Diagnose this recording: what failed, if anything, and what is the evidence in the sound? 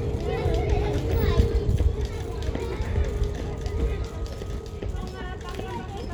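Compressed frames skipped at 0.33 to 0.38 s and again at 1.63 to 1.72 s. This is a codec-stage fault. At each point the sound jumps forward by around 150 ms. Whole compressed frames were either missing from the stored file or rejected by the decoder as corrupt, so playback resumes further on, past the frames left out.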